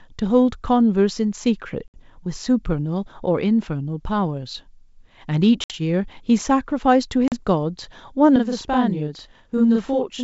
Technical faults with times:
1.88-1.99 packet loss on an ADPCM call
5.64-5.73 packet loss on an ADPCM call
7.28-7.39 packet loss on an ADPCM call
8.36-10.23 channel delay (doubling)

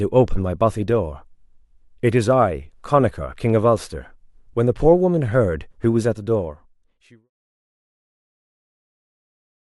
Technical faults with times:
none

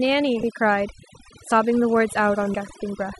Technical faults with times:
0.00-3.19 overdone noise removal
0.43 damaged data in a compressed stream
2.54 damaged data in a compressed stream

